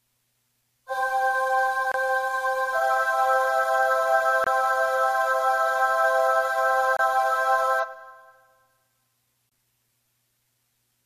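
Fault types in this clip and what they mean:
Gap between chunks: The audio arrived in blocks of about 2.5 s, and a silent hole of roughly 25 ms sits at each join, at 1.92, 4.44, 6.97 and 9.49 s. Nothing is missing, but the sound is briefly interrupted. On the waveform each gap is a flat, near-silent stretch with abrupt edges. On a spectrogram it is a narrow vertical blank band across all frequencies, repeating at that steady 2.5 s spacing.
Damaged data in a compressed stream: Corrupted bytes in the encoded file make the decoder misread frames until it finds its place again, producing short glitches from 4.16 to 4.21 s and from 7.79 to 7.85 s, each lasting about 40 to 65 ms. The waveform shows a brief disturbance whose shape doesn't match the surrounding sound. On a spectrogram it appears as a short patch that breaks from the surrounding sound, with sharp start and end boundaries.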